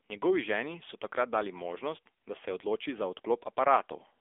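Speech that sounds thin, boxed-in and noticeably buzzy and synthetic throughout, with nothing above 3.6 kHz and little below 300 Hz. This is AMR narrowband mobile codec damage: a phone-band vocal-tract model whose plainly audible coarseness fits a low bitrate near 8 kbps.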